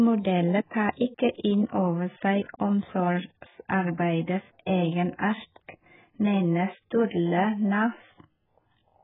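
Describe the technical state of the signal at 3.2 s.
At 3.2 s the speech shows the same damage it carries from start to end: nothing above 3.8 kHz, a dull, smeared top, and a warbling, fizzy texture on sustained sounds and sibilants. The likely cause is AAC compression (AAC-LC) at a very low rate, the heavy damage fitting something near 8 kbps, where quantising frequency lines against a hearing model leaves spectral holes. A plain low-pass filter would dull the sound without that warble.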